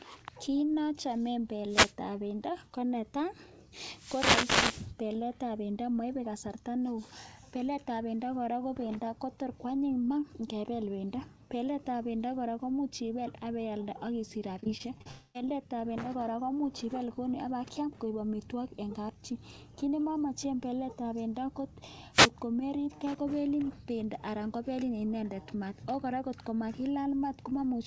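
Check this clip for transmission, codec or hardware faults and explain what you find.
Three kinds of fault turn up in this speech, all in transmission rather than in the recording itself. The audio also reached the listener over a call link with nothing above 8 kHz, which fits a G.722 codec at 64 kbps.

Wireless microphone noise hits occur at 1.67 to 1.95 s, 3.91 to 4.94 s and 22.12 to 22.30 s. The analogue FM radio link from the microphone faded as reflected signals cancelled the direct one, and the receiver's own noise rose through the gap. Each hit sounds like a swish of static over the voice. The second one lasts about a second.

Repeated packet loss (robotic sound) runs from 14.60 to 15.07 s. Packets kept going missing or arriving late over this half-second, and the receiver patched each hole by extending the sound just before it. There are half a dozen short holes, none longer than about 35 ms. 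Together they make up over a quarter of the span. The speech turns choppy, with small pieces gone.

The long network dropout follows straight after, from 15.11 to 15.36 s. For about a quarter of a second the speech is replaced by a synthetic continuation of the last sound, a buzzy smear that never drops to silence. The likely cause is a stretch in which no audio arrived at all, so the receiver filled the whole gap. When the speech resumes, the part that fell into the gap is missing.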